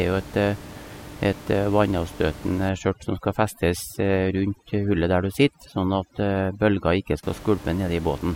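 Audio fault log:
2.69–7.23 s, overdone noise removal: bands near the noise estimate are gated out, so the background drops and breaks up into twinkling, warbling specks; the spectrogram shows blotchy gaps, twinkling specks and a near-empty floor.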